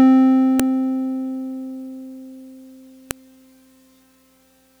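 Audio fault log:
0.60 s and 3.11 s, file header played as audio: sharp, loud clicks cut through the music where joined WAV segments kept headers, whose bytes play as samples.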